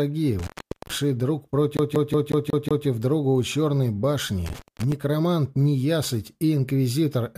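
At 0.39 s an intermittent contact opens: a loose cable or plug breaks the signal path for about 432 ms, so the sound drops out with crackle at each edge and only faint hiss in the gap, returning by 0.96 s.

From 1.77 to 2.87 s the audio behaves like a CD stuck on one turn. A scratch sends the laser back a track at the same point on each rotation, so a 183 ms fragment plays six times with a brief mute at every jump, producing a rapid, evenly spaced stutter.

The intermittent contact recurs at 4.46 s, this time open for about 199 ms, with the same crackle at the edges and hiss-only gap before the signal comes back at 4.92 s.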